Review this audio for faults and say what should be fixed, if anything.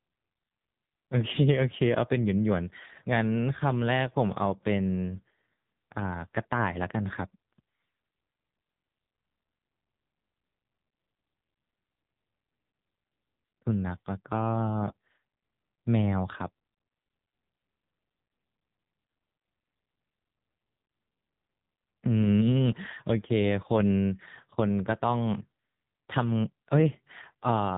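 The speech carries AMR narrowband mobile codec damage from start to finish, and it is heavy. Nothing passes above about 3.8 kHz, and the voice sounds buzzy and synthetic because the codec rebuilds it from a vocal-tract model driven by a few pulses per frame. That level of damage points to a low mode around 6.7 kbps. The buzz and synthetic texture set it apart from a plain low-pass or telephone band limit, which would dull the sound without that artificial quality. To prevent it, record or route the audio over a wideband path, or at least use a higher AMR mode, rather than capturing it through a narrowband mobile call.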